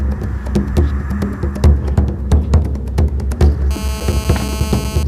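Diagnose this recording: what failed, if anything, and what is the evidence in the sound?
Analogue stage picked up GSM phone buzz from 3.71 to 5.03 s: a steady, raspy 217 Hz buzz, about 13 dB under the signal, from rectified call bursts.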